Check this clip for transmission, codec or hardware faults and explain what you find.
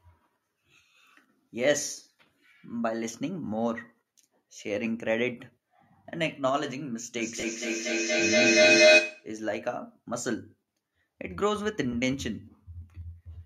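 Two faults occur in this speech clip: a feedback howl and lost LE Audio frames.

From 7.18 to 9.37 s, a feedback howl builds near 700 Hz, peaking about 11 dB above the speech and pulsing roughly every 200 ms. A loudspeaker-microphone loop is gaining level on each trip. Unlike echo, it grows rather than fading.

At 7.40 to 7.43 s and at 11.92 s, there are lost LE Audio frames. The 30 ms and 10 ms gaps fit three frames and one frame. The decoder refilled them with a noisy smear of the last spectrum, not hard silence as in a plain dropout.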